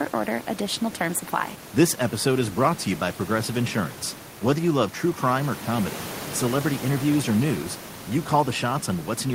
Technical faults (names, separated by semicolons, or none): none